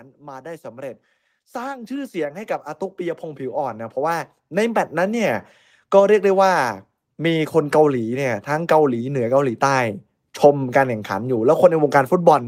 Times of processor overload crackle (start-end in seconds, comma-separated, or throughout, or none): none